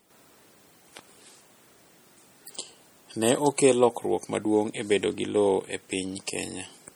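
Throughout, the speech swirls and sounds watery, with smeared attacks, likely from MP3 compression near 48 kbps. Unlike plain filtering, faint detail flickers from frame to frame.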